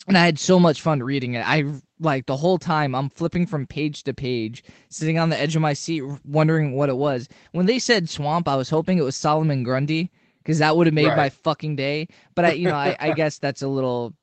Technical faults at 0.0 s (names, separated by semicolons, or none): none